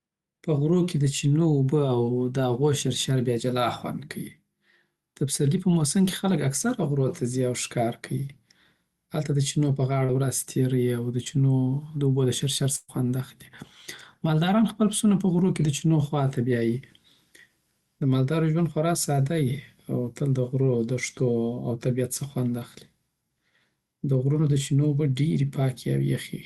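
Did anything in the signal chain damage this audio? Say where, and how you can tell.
Yes. The damage happened on the network leg of a call. The audio is band-limited at 12 kHz, which fits an Opus stream at around 32 kbps.

The first fault is short concealed packet loss at 10.05–10.10 s, just after "هلته د چینو په", and at 11.24–11.28 s. Each sounds like a brief smear or wobble. About 40 ms and 20 ms of audio failed to arrive in time. The decoder extended the preceding sound, by roughly 31 ms and 12 ms, then blended back into the real signal.

The second fault is a burst of packet loss at 12.76–12.90 s, right after "داوبو دشرشر". Here the last sound is held as a buzz or hiss that fades for about 124 ms with no silence. The sound then resumes with roughly 120 ms of the original missing. That length points to several consecutive packets lost or arriving too late for the jitter buffer, with the concealment decaying as the gap went on.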